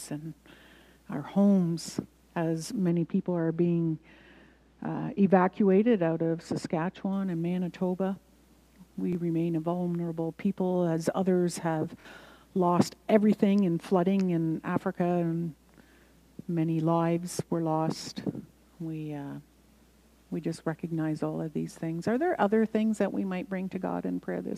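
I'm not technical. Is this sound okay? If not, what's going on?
No. Two kinds of fault can be heard.

From 2.89 to 7.13 seconds there is de-emphasis applied wrongly. A treble-cutting filter, meant only to undo a matching treble boost made earlier, has been used where no boost existed or has been applied twice. It gently removes the highest frequencies, so during those four seconds the sound turns dull and muffled, as if heard through a cloth. At 7.13 seconds the normal brightness returns.

The second fault is a repeated buffer, heard twice. Audio is delivered to the playback device in small chunks, here each about 23 ms long, which fits a 1024-sample buffer. When the next chunk arrives late, the device plays the previous one again. From 9.13 to 9.15 seconds one chunk plays an extra time, giving a brief stutter and skipping roughly 20 ms of audio. From 12.01 to 12.05 seconds a chunk repeats twice more, making a slightly longer stutter and losing about 50 ms.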